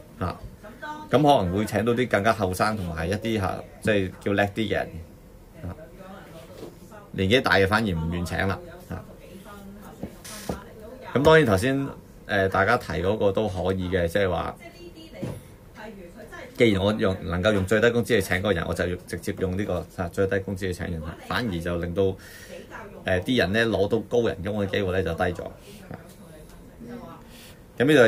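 No technical faults are audible.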